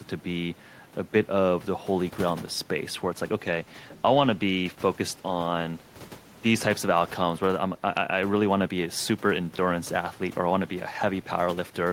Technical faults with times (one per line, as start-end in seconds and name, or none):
2.99-8.29 call bitrate drop